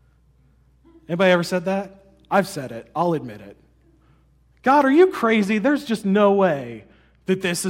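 A speech clip in which, from 5.22 s to 7.22 s, just after "are you", the sound turns dull and muffled, the sign of de-emphasis applied wrongly: a treble roll-off intended to reverse pre-emphasis has hit audio that never had it, or has been applied twice. The response tilts smoothly downward, about 8 dB lower at 10 kHz than at 1 kHz. On a spectrogram the upper bands dim evenly across those two seconds, while the waveform looks almost unchanged.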